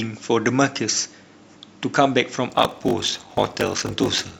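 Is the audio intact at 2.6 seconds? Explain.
No. From 2.48 s to the end, a block size mismatch (padded) pads short blocks with zeros, which fits 1024-sample reads. This produces a 46.9 Hz buzz and slows the speech to 0.861 speed at unchanged timbre.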